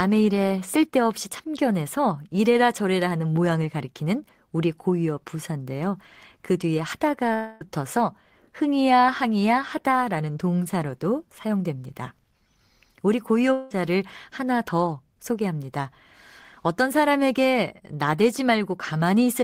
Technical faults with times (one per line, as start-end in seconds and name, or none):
7.33-7.62 long network dropout
13.52-13.72 long network dropout